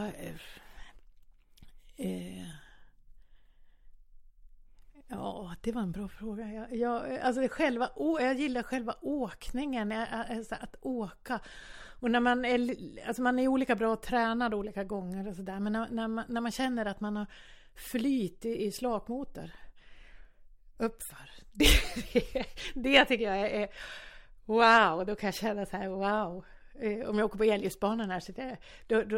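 Speech recording with no audible technical faults anywhere.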